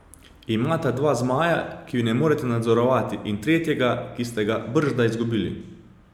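No technical faults can be heard anywhere in this recording.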